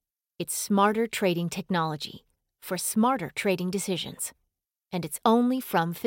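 No technical faults turn up anywhere in this speech recording, so there's nothing to flag at any point along the way.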